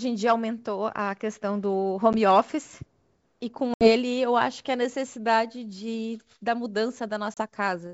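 Packet loss on the ADPCM call leaves abrupt silent holes at 2.13 s, 3.74–3.91 s and 7.34–7.38 s. Each shows as a flat line in the waveform. The out-of-step decoder restarts the speech slightly distorted.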